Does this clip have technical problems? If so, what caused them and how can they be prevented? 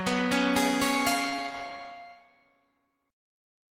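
Yes. A short stall from a late packet at 1.29 to 1.34 s emptied the jitter buffer, so the last sound was held about 29 ms, adding slight lag. It can be prevented by enlarging the jitter buffer or reducing network delay variation.

Short concealed packet loss at 1.36 to 1.40 s dropped 20 ms of audio; about 14 ms was synthesized from the preceding sound, leaving a brief smear. It can be prevented by adding forward error correction or redundancy on a less lossy network path.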